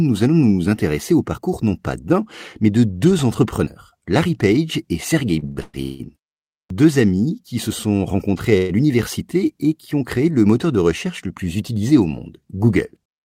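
From 5.39 to 6.01 s the speech drags through repeated stalls (stutter): four short gaps, the longest 179 ms, where the jitter buffer ran dry and the last sound was stretched to fill 420 ms. Unlike a single freeze, the holds recur, concealing about two-thirds of that stretch, yet nothing is dropped.

At 6.66 to 6.70 s comes a clipped start after a pause. After 0.57 s of quiet, the output path had gone to sleep and was still waking, so roughly 43 ms is swallowed and "amis qui se sont" begins abruptly, missing its opening.

From 8.57 to 8.71 s, between "se sont rencontrés à" and "l'université et qui ont", there is a call audio freeze. The last sound is held as a brief buzz or hiss lasting 119 ms, with no drop to silence, and the speech then resumes where it stopped, now 119 ms later. The likely cause is packets held up in transit. Unlike the earlier stutter, this is one isolated hold rather than a cluster.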